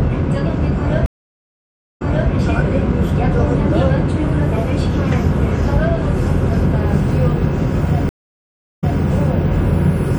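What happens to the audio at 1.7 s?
A stream reconnect runs from 1.06 to 2.29 s: the connection drops, leaving 0.94 s of silence, then a fresh decoder resumes about 0.29 s earlier, repeating audio. MP3 compression, likely at 64 kbps, also applies throughout, audibly adding a watery, swirling texture.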